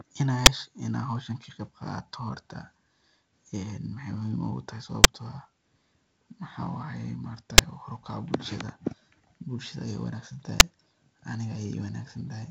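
Speech, passed through G.722 wideband telephone coding, with nothing above 7.8 kHz and a light lower-band noise that fits its 48 kbit/s mode. Invalid numbers at full scale cause four loud single bangs, at 0.46, 5.04, 7.58 and 10.6 s. Each is a 10 ms block where a calculation broke down and the output jumped to its maximum value.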